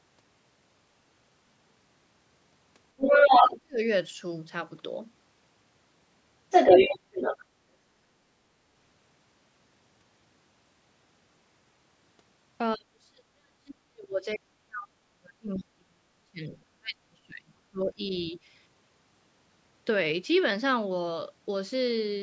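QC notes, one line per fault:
2.97–3.47 s and 6.50–7.45 s, other side's voice leaking through: a second voice sits about 10 dB above the talker, likely residual loudspeaker echo the canceller missed. An added voice sets it apart from suppression, where the talker's own voice drops.
14.32–14.37 s and 15.58–15.63 s, other side's voice leaking through: brief, faint scraps of that second voice, roughly 25 to 30 dB under the talker, heard during the long dip.
3.41–3.82 s and 12.76–18.06 s, speech suppressed in double talk: the talker's voice nearly vanishes, around 35 to 40 dB down, for about 0.4 s and then about 5 s while the other side is present. This is likely the canceller turning down both voices at once.
18.27–18.35 s, speech suppressed in double talk: a shallow dip of about 5 dB lasting under a tenth of a second. Unlike a dropout, the talker's voice stays present, only turned down.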